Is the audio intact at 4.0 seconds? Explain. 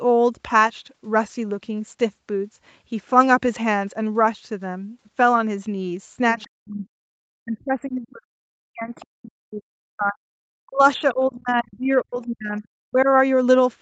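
Yes, the speech is intact at 4.0 seconds, with no fault at that moment.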